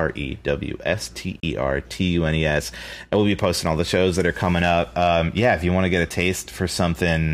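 At 1.40 to 1.43 s the speech drops out abruptly for roughly 30 ms, then picks up further along as though it had kept playing underneath. This gap is a Bluetooth dropout, most likely audio packets reaching the headphones too late and being discarded. The lost span fits about two packets. On a waveform it shows as a flat, near-silent stretch with steep edges. A spectrogram shows a narrow vertical blank band cutting across every frequency.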